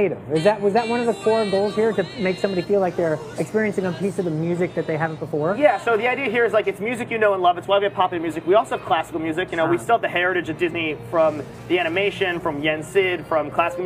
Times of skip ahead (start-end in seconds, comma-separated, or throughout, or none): none